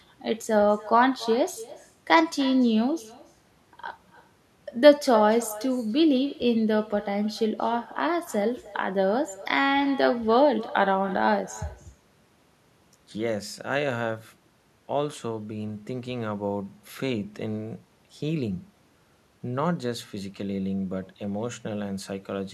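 Speech runs through the whole clip with echo with no canceller: every phrase returns roughly a third of a second later as a copy about 19 dB quieter and thinner. The far end is playing the call over a loudspeaker and its microphone feeds it back with nothing removing it. On a spectrogram each syllable's harmonic pattern reappears as a fainter, blurred ghost shifted right by that delay; on a waveform, low-level bumps trail each burst of speech.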